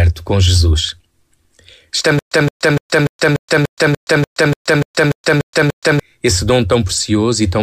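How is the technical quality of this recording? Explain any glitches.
The recording has one clear glitch, a stutter with silent gaps from 2.19 to 6.00 s. A 169 ms scrap of speech repeats 13 times, each followed by 124 ms of dead digital silence, ticking along on a steady 293 ms cycle. That's likely a stalled stream replaying its last fragment on every retry, so the speech that belonged in that stretch is simply gone.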